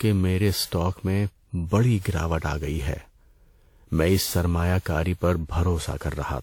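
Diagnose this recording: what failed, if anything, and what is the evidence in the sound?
Codec stage: generation loss, likely from about ten WMA re-encodes near 96 kbit/s. Throughout, the speech sounds swirly, hollow and smeared, with blurred attacks.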